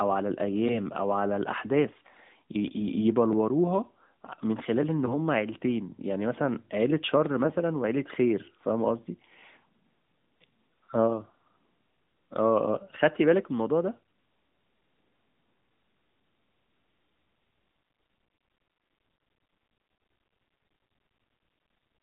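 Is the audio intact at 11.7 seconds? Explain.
Yes, the audio is intact at 11.7 seconds, with no fault at that moment.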